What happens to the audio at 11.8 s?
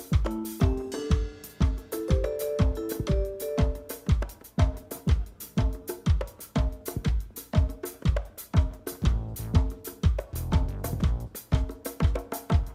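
Nothing goes wrong at 11.8 s; the audio plays through that moment intact, with no dropout, click or distortion to be heard.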